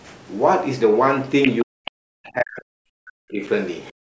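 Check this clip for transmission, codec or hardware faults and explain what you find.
Three echo-cancellation faults are audible, spread from 1.43 s to the end of the speech, on a band that stops at 8 kHz as the call's microphone processing would give.

Other side's voice leaking through, at 1.43 to 1.62 s, 1.85 to 1.91 s and 3.85 to 3.92 s. A second voice surfaces briefly behind the talker: nearly as loud as the talker in the first burst, noticeably lower in the second, faint in the last. The likely cause is a loudspeaker on the talker's device feeding the far end back into the microphone, with the echo canceller failing to subtract all of it.

Speech suppressed in double talk, at 1.63 to 2.7 s and 2.86 to 3.42 s. The talker's voice sinks sharply, by as much as about 40 dB at its deepest, over roughly a second in the first stretch and half a second in the second. This is likely the canceller reacting to both sides talking at once: unable to tell the near voice from the echo, it pulled the level down on both.

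Background gated by the echo canceller, at 3.92 to 4.03 s, right after the last leaked fragment. The room sound drops out for about 0.1 s, about 40 dB down, then returns. While the loudspeaker signal was present, the canceller clamped the microphone almost shut and released it once the echo had passed.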